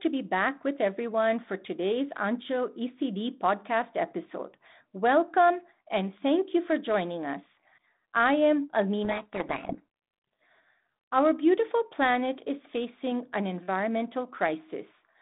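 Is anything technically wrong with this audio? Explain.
Yes. Between 9.04 and 10.46 s there is a codec payload misread. The speech here travels as G.726 at 32 kbit/s, and for that stretch the decoder unpacks each code word with its bits in the wrong order, so every sample is rebuilt from the wrong prediction difference. The speech is buried under harsh, gritty distortion that clears at 10.46 s. On a spectrogram the harmonic striations dissolve into dense broadband noise filling the line band up to about 3.7 kHz. The waveform turns ragged and spiky across the segment.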